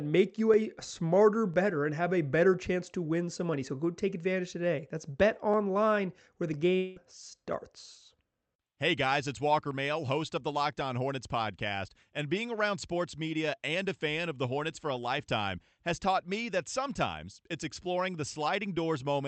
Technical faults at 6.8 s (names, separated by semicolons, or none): long network dropout